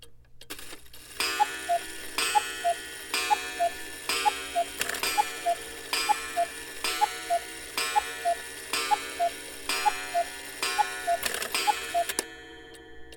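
Lost LE Audio frames on the Bluetooth link break this audio twice: a single 10 ms gap at 2.29 s, then about 30 ms from 6.48 to 6.51 s, which fits three consecutive 10 ms frames. The LC3 decoder patches each gap with the preceding spectrum under randomised signs, so the audio turns into a brief noisy smear.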